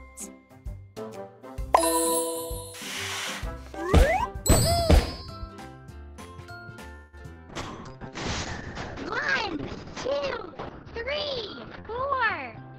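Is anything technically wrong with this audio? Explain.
Yes. From 6.95 to 7.15 s there is a call audio freeze: packets were likely delayed, so the receiver stretched the last sound into a fading buzz or hiss for 176 ms, adding that much delay.

Short concealed packet loss follows at 7.19 to 7.22 s and 7.34 to 7.41 s. Each time, 20 ms never arrived and was filled from the preceding sound, which gives a brief smear or wobble.

A call bitrate drop starts at 7.50 s. The encoder falls from 96 to 6 kbps, which narrows the bandwidth from 20 kHz to 6 kHz, and it stays at the lowest rate for 4.24 s. The sound turns rough and muffled and does not recover before the end.

A jitter buffer speed-up runs from 11.54 to 12.76 s. The buffer shed about 150 ms of pitch-period slices, so the audio plays at 111% speed with its pitch unchanged and sounds hurried.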